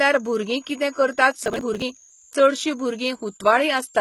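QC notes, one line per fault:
Throughout: switching supply whistle. A high whistle wanders between 6.2 and 7.5 kHz, near 7 kHz, about 30 dB below the speech. A power supply is switching in the audible range.
Throughout: HE-AAC compression, likely. Nothing survives above 11.8 kHz, and s sounds turn gritty and metallic. The treble is copied up from lower bands, which fits a very low bitrate near 16 kbps.
1.46 to 1.82 s: processor overload crackle, right after "कितें करतात". The speech tears into a gritty crackle. Around thirty buffers of roughly 10 ms each are skipped over this stretch, so each one leaves a hard-edged gap.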